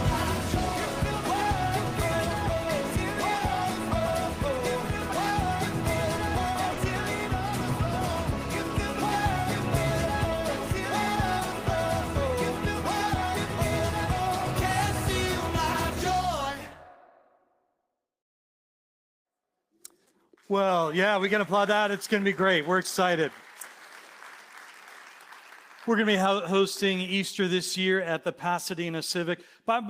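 At 6.73 to 6.79 s the audio has a short concealed packet loss: about 40 ms of the stream arrived too late for the decoder, and the receiver covered the gap by extending the preceding sound, then crossfading back into the real signal. It comes across as a brief smear or wobble. On a spectrogram the harmonics or noise bands run unnaturally flat and repeated through that slice before normal detail resumes. In the waveform, a short stretch continues the previous sound with no fresh onsets.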